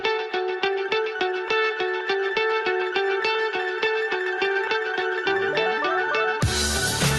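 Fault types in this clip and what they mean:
No fault types can be heard in this clip.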